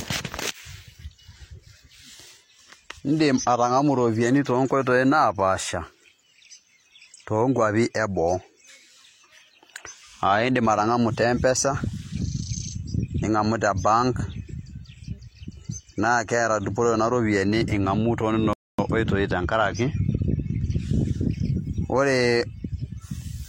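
A rebuffering stall interrupts the speech at 18.53 s: the player runs out of downloaded audio, falls silent, then resumes exactly where it stopped, adding 250 ms.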